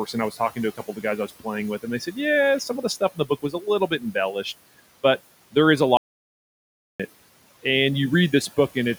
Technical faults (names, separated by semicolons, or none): noise suppressor artifacts; speech cut by the noise suppressor; audio dropout to silence